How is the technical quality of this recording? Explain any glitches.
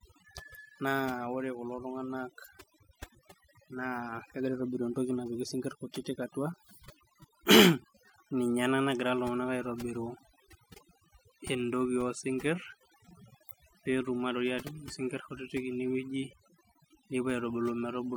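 The recording is compromised by one fault that runs through all of it. Overdone noise removal is present from start to finish. A noise reducer was pushed too hard. It cut frequency bands that sat near its noise estimate, and quieter parts of the speech went too. The background drops and breaks up into twinkling specks.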